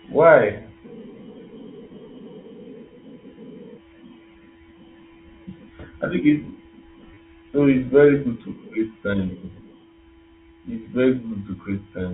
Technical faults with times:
7.14-7.17 packet loss with last packet repeated

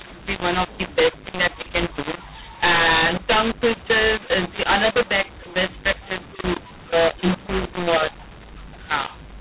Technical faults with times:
0.00-9.40 mu-law and A-law mixed up

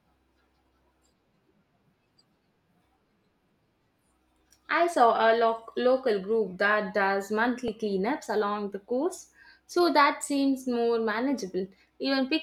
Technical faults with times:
7.68 repeated buffer

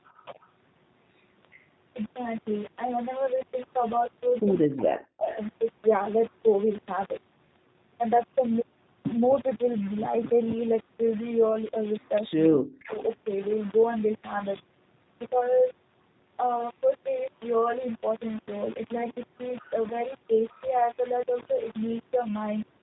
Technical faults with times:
0.00-22.83 low bit depth without dither
0.00-22.83 G.729 codec
0.34-0.38 speech suppressed in double talk
4.62-5.24 speech suppressed in double talk
5.01-5.37 echo leak
22.24-22.28 VoIP packet loss concealed by the speech codec

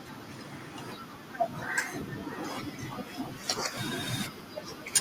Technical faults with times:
2.01 compressed frames skipped
3.77-3.81 compressed frames skipped

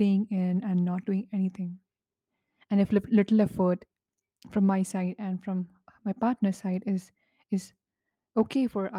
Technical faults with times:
none

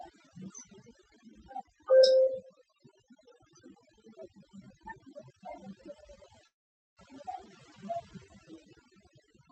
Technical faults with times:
0.00-9.51 overdone noise removal
6.47-6.99 call audio freeze

